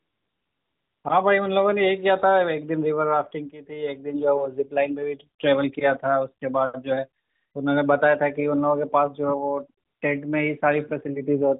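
A speech recording carried over a narrowband mobile link, with the whole band ending at 4 kHz and a light codec colouring that fits AMR-NB at its top 12.2 kbps mode. It has three stretches of AMR comfort noise: 0.0 to 1.04 s, 7.24 to 7.54 s and 9.86 to 10.02 s. In each, the handset decided nobody was talking and stopped sending speech frames, so the receiver generated a smooth synthetic hiss from a rough level-and-spectrum description in place of the real background. On a spectrogram these show as featureless, evenly shaded blocks below 4 kHz that start and stop abruptly. On the waveform they are flat, uniform-amplitude bands.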